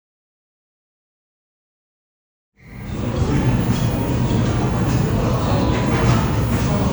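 Everyday sounds with no technical faults; the level fades in smoothly from roughly 2.5 s to 3.51 s, with no click or hard edge.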